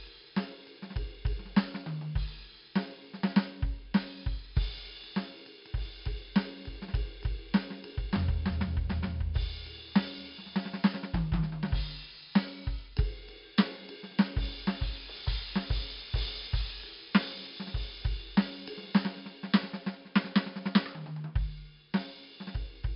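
Throughout the music, 4-bit ADPCM compression leaves level-following gritty hiss and smeared attacks, with nothing above 5.3 kHz, consistent with roughly 44 kbps coding.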